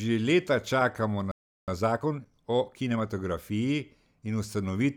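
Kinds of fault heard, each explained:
Playback stall: the speech stops mid-flow for 0.36 s from 1.31 s, likely because the player ran out of buffered data or its thread was blocked.
Time-compressed catch-up: from 1.68 s to 3.12 s the player clears its backlog by cutting and cross-fading small pieces. The speech is hurried at 1.25 times normal speed with unchanged pitch.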